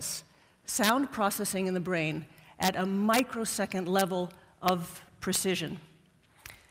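Integer overflow cracks at 0.84–0.89, 2.63–2.68, 3.14–3.19, 3.99–4.01, 4.68 and 5.35 s. Peaks pushed about 1 to 3 dB past full scale wrap to the opposite sign instead of being limited, each producing a violent, harsh crack far sharper than clipping.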